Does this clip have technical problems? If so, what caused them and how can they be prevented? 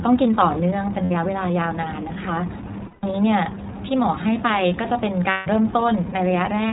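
Yes. The speech is band-limited with nothing above 4 kHz, and it has a plainly audible rough, synthetic edge. That points to the iLBC codec, which codes each frame's excitation independently, consistent with its 13.33 kbps mode using 30 ms frames. To prevent this, use a wideband codec such as Opus where the link allows.

At 1.05 s (60 ms), 2.88 to 3.04 s and 5.30 to 5.47 s (150 ms each), the speech turns into a held, slightly buzzy vowel. These are lost iLBC frames: the decoder repeats the last pitch cycle blended with noise, and the voice is right again almost at once afterwards. The shortest gap fits two 30 ms frames, and the longer ones fit about five. To prevent this, reduce packet loss with a more stable network, QoS prioritisation or forward error correction.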